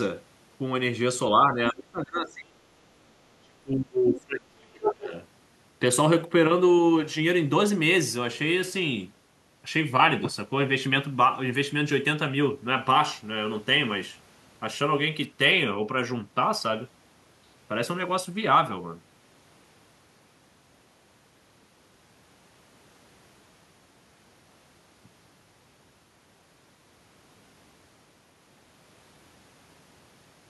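From 1.46 to 2.64 s, and again from 3.41 to 5.12 s, the echo canceller likely could not tell the talker from loudspeaker echo while both sides spoke, and clamped down on everything. This speech suppressed in double talk sinks by roughly 25 dB, then nearly 30 dB, dipping and breaking up.

Between 4.85 and 4.93 s, the canceller likely failed to remove the far end from the microphone, so the other side's voice leaks through as a brief scrap at roughly the talker's own level.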